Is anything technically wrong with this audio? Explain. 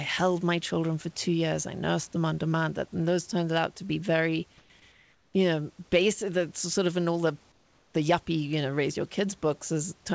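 Yes. Three pauses in the speech have their real room background replaced by comfort noise: 4.58 to 4.70 s (120 ms) just after "out to be very", 4.92 to 5.34 s (420 ms) ending at "you know basic", and 7.52 to 7.94 s (420 ms) after "of in all the". In each gap the room sound turns into a flat, featureless hiss, about 2 dB quieter in the first two and about 5 dB quieter in the last. The likely cause is discontinuous transmission: the sender's voice detector stops sending audio in the pauses, and the receiver fills them with synthetic noise that only roughly matches the background's spectrum. The live room sound returns when the speech resumes. Across the whole clip, nothing is heard above 8 kHz, which fits a G.722 call codec.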